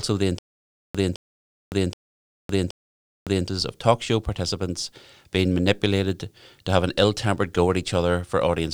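Speech clip with a stutter with silent gaps from 0.39 to 3.48 s: a 214 ms fragment repeats four times, each followed by 560 ms of digital silence, before "of talk show participants". The audio from that stretch is missing, likely from a stalled stream replaying its last buffer.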